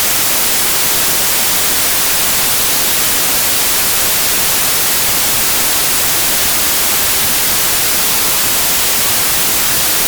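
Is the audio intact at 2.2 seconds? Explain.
No. At 2.2 seconds, as throughout, the samples are built from the wrong bytes: misassembled byte order or alignment turns the rapidly changing low bits into the dominant part of each value. It sounds like loud, harsh broadband noise, appearing as an even full-band wash on a spectrogram and a dense waveform.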